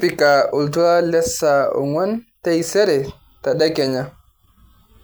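No technical faults can be heard anywhere in this speech recording. There is nothing at any moment that calls for a fault description.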